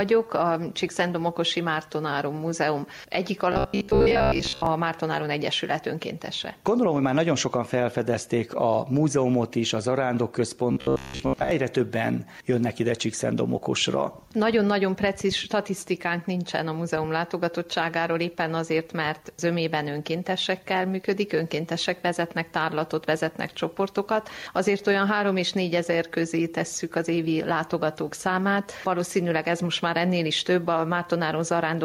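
Gain pumping runs through the whole clip: the gain swings by about 5 dB, pulling down on loud sounds and leaving everything squashed. The likely cause is gain set far too high with a fast limiter clamping down. Unlike a noise gate, the gain moves smoothly rather than cutting off.

From 3.53 to 4.67 s and again from 10.72 to 11.51 s, robotic sound from repeated short buffers appears as a rigid, metallic buzz at 66.7 Hz. New audio likely arrived too seldom, so a chunk of about 15 ms was looped and most of the real audio was skipped. Unlike a dropout there is no silence, and unlike crackle the fault carries a steady pitch.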